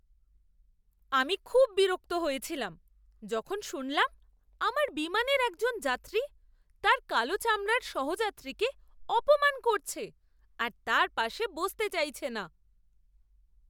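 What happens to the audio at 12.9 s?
Nothing goes wrong at 12.9 s; the speech carries on intact through that moment with no dropout, click or distortion.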